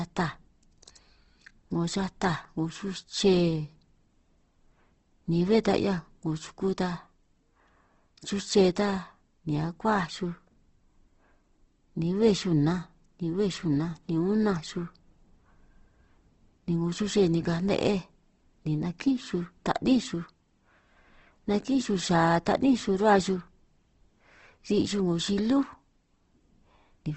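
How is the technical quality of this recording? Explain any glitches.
The recording is compromised by plainly audible coding damage across the full length. Throughout, the speech sounds rough and grainy, likely from Opus compression in its CELT mode at a rate that fits about 16 kbps. Starved bands get noise-like filling, and a spectrogram shows a flat ceiling at 8.1 kHz.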